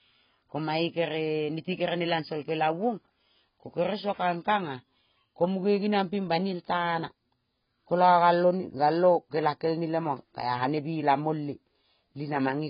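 From start to finish the speech carries heavy AAC compression damage, likely from AAC-LC at a very low bitrate around 16 kbps. Nothing survives above 5.1 kHz, so sibilants turn dull and fizzy, and a spectrogram shows a hard ceiling.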